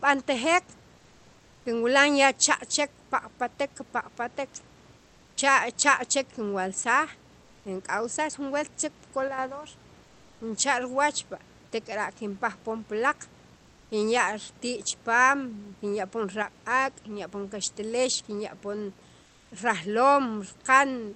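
Comfort noise in place of the background appears in this speech clip at 0.97–1.65 s, 4.97–5.37 s, 10.03–10.41 s, 13.55–13.91 s and 19.25–19.51 s. In those pauses the real room background, already about 33–35 dB below the loud parts, gives way to a smoother synthetic noise about 2–3 dB quieter. The likely cause is Opus discontinuous transmission, with the receiver synthesising filler noise while the sender goes quiet. One channel drops out at 9.28–9.38 s and 16.42–16.47 s, where the mono sum suddenly sinks by about 6 dB for those brief stretches, likely because one stereo side of the signal vanished before being summed.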